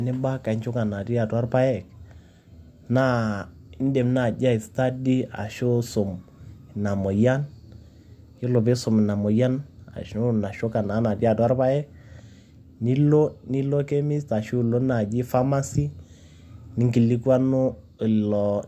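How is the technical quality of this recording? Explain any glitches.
Nothing goes wrong technically anywhere in the recording, so there are no glitches to explain here.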